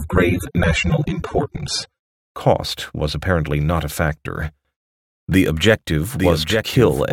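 For the first 2.0 s, the speech comes from an adaptive stream starting at a low bitrate. Nothing is heard above 14.6 kHz, and codec artefacts are stronger. The dull, smeared sound fits a stream of about 24 kbit/s. At 2.0 s the quality jumps up without a gap, as the player steps to a better version.

From 5.32 s to the end, the audio track is doubled. A full-band copy runs about a second behind the original, roughly 5 dB quieter. It has no decay or room colour, and it starts abruptly. A second, slower capture path is the likely cause.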